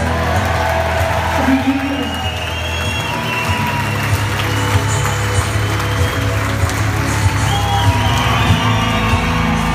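From 0.62 s to 8.99 s, about five clicks recur every 2.09 s. These are clock drift buffer slips, likely from two clocks differing by roughly 100 ppm.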